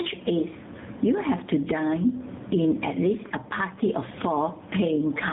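Speech, with two faults running through the whole clip. Gain pumping is audible: the gain is pulled down by around 15 dB on each loud syllable, likely from far too much gain feeding a fast limiter. Tandem speech coding makes the speech rough, muffled and warbly, with nothing above 3.8 kHz. The sound points to two narrowband speech coders in a row, the second re-coding the first's already degraded output.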